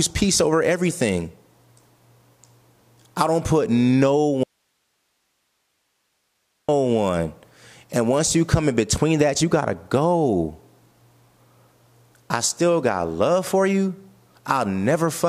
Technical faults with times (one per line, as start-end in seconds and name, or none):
4.43-6.69 audio dropout to a faint residue